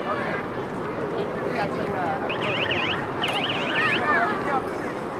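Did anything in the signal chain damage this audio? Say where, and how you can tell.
Yes. At 2.29 to 2.31 s the sound lurches forward. Roughly 400 ms of material is missing, and the audio on either side is butted together with no silence or fill in between, so the event is heard as a hard jump rather than a dropout. This is a skip ahead in the network and jitter-buffer stage. A block of audio was discarded while later audio was already queued, and playback resumed from that later point. The playout delay shrank by about the same 400 ms.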